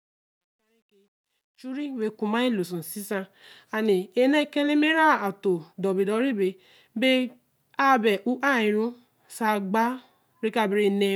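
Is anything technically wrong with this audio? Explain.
Yes. From 0 to 2.08 s, the fade-in sounds gritty and grainy, worst from 0 to 1.38 s. This is truncation distortion on a fade: the quiet start was rendered with only about 11 bits and no dither, so low levels collapse into coarse square steps.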